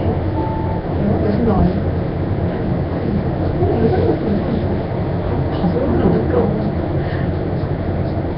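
The sound was most likely squeezed through Nellymoser compression, the old Flash codec, at a rate that fits roughly 22 kbps. Heavy damage throughout this everyday-sound recording leaves a rough, hissy noise fill where weak bands lost their bits, a smeared underwater blur, and nothing above 5.3 kHz.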